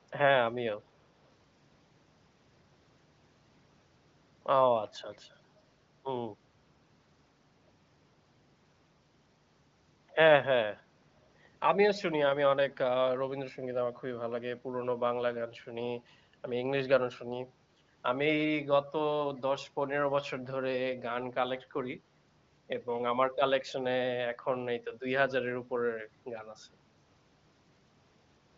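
At 5.13 to 5.18 s a very faint copy of the speech surfaces 389 ms behind the original, likely an echo leak from a loudspeaker past an incomplete echo canceller. A spectrogram shows a dim smear repeating earlier harmonic stripes; the waveform barely changes.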